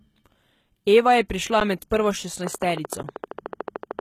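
Throughout the clip the speech carries plainly audible codec damage: nothing is present above 14.9 kHz, and the upper band sounds rebuilt rather than original, with sibilants turning gritty or metallic. This is likely HE-AAC compression, which fits a bitrate around 20 kbps. The codec keeps only the lower spectrum and synthesises the treble by copying lower bands upward.

At 1.60 s there is an underrun with held sample. The output buffer ran empty for about 10.7 ms, which fits a 512-sample buffer, and the converter held its last value, flattening the waveform. Essentially no audio was lost, so playback resumes where it stopped and ends the gap softly.

From 2.47 s to 4.0 s a train of clicks runs at a regular 13.3 per second, about twenty in all, peaking about 10 dB above the speech. The clicks are alike in shape, likely from interference or a faulty connection or supply.

At 3.03 s the same held-sample underrun recurs, again about 10.7 ms long, with no audio lost.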